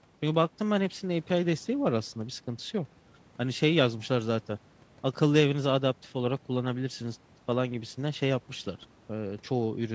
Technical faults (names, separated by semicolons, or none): none